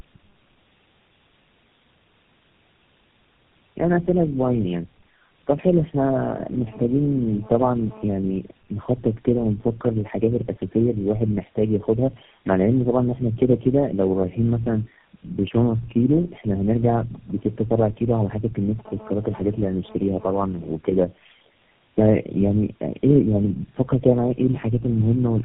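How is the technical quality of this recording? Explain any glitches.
Quality is poor for the full length of the clip because of tandem speech coding. The speech has passed through several narrowband speech coders in succession, each re-encoding the previous one's already degraded output, so the errors compound. It sounds rough, muffled and warbly, with nothing above 3.7 kHz. This fits a chain of about four coders ending in GSM full rate.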